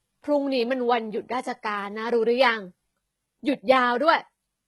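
Throughout the speech, the treble has a synthetic, gritty quality: s sounds come out lispy and metallic, and the top end feels detached from the lower spectrum, with no content above about 11.8 kHz. This is likely HE-AAC compression at a very low bitrate, around 16 kbps. The codec coded only the lower band and rebuilt the treble by copying lower bands upward. As a result, the upper harmonics don't line up with the real ones, and the damage is heavy.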